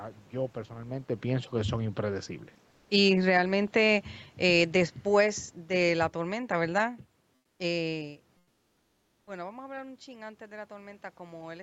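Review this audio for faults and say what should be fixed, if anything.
Automatic gain falling: the gain control judged the input too loud or its background too strong and lowered its gain gradually, from 2.80 to 3.45 s just after "pienso que son impredecibles" by about 8 dB, then from 4.3 to 6.97 s by about 5 dB. The speech and room background sink together. Using a fixed or slower-acting gain with a lower input level would prevent this.

Comfort noise in place of the background: in pauses the sender stopped transmitting, likely through Opus discontinuous transmission, and the receiver filled in synthetic noise. From 7.35 to 7.59 s (240 ms) and 8.39 to 9.27 s (880 ms), the real room background, about 45 dB below the loudest speech, becomes a smoother synthetic noise, about 9 dB and 4 dB quieter respectively. Disabling DTX would keep the genuine background.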